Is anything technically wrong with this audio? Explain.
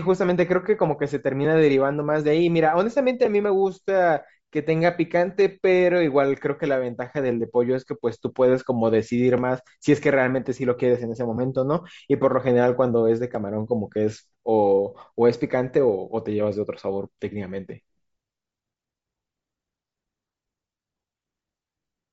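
Yes. Throughout the clip, likely Bluetooth LC3 compression at a low rate (consistent with roughly 32 kbps) discards upper-spectrum detail and substitutes noise, giving the speech a plainly audible breathy, grainy edge.

At 3.25 s, lost LE Audio frames: a brief 7.5 ms gap, consistent with one dropped frame, was concealed by reusing the previous spectrum with scrambled phase.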